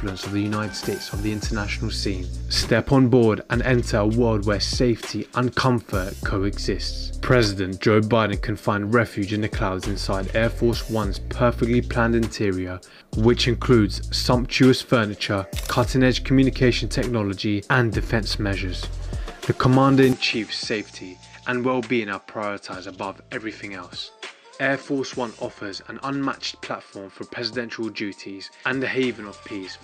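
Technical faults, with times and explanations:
20.13–29.83 s, input switched to a poorer device: with no gap, the sound loses everything above 9 kHz, drops about 5 dB and gains faint background noise, likely from a narrower-band microphone.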